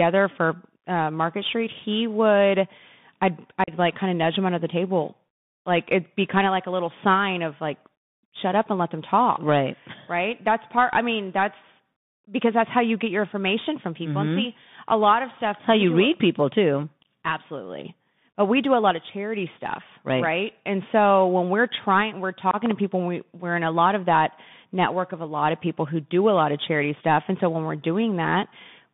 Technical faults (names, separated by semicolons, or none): Bluetooth CVSD headset codec; unconcealed Bluetooth headset packet loss; loud pop